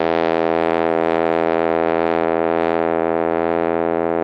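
No technical faults can be heard anywhere in the music. The call path it passed through shows in the top end, which stops at 12 kHz, consistent with an Opus stream at about 32 kbps.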